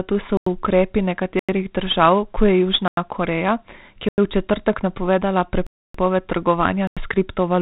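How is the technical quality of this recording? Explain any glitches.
The quality is poor: heavy codec grit throughout, plus six hard dropouts.

4-bit ADPCM compression affects the whole clip. Each sample is coded as a coarse step from a prediction, so the error is hiss that rises with the speech, with distortion on attacks. Nothing reaches above 3.9 kHz, which fits roughly 32 kbps. A spectrogram shows a flat ceiling there and a grainy noise floor under every syllable.

Blocks of digital silence appear at 0.37, 1.39 (ending just before "držav kot je"), 2.88 (just after "držav kot je"), 4.09, 5.67 and 6.87 s. Each lasts 93 ms, except the one at 5.67 s, which lasts 279 ms, between "je v četrtek napovedala" and "trgovanja s". The 93 ms length fits a 4096-sample buffer left unfilled. Each gap is heard as a short hole and shows as a dead-flat waveform line and a blank vertical band on a spectrogram.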